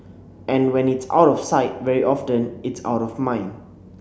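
No technical faults can be heard anywhere in the speech.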